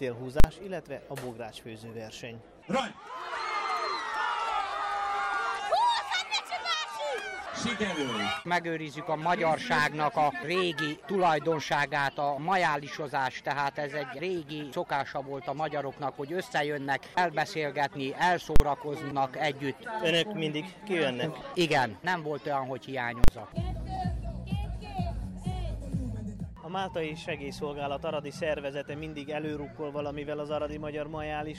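A calculation produced invalid numbers at full scale, pinning the output to its extreme for 40 ms blocks at 0.4, 18.56 and 23.24 s, each heard as a single loud bang.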